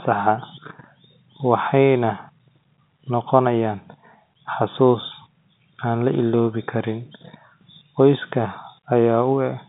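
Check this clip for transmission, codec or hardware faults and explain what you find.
No transmission, codec or hardware faults.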